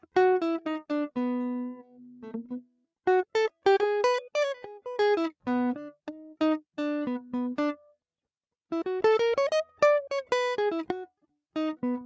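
From 1.83 to 2.24 s, the music is cut by the noise suppressor. It mistakes the sound for noise and pulls it down by about 11 dB for roughly 400 ms. The level sags and the tail thins out. From 2.62 to 2.86 s it happens again, deeper, about 19 dB, for around 200 ms. The call microphone processing also caps the band at 8 kHz.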